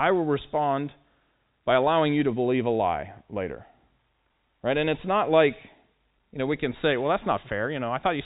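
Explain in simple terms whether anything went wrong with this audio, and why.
Nothing went wrong here: the speech carries the narrow, phone-line sound of G.711 telephone coding, with nothing above about 3.8 kHz, which is normal for that kind of call and not a fault.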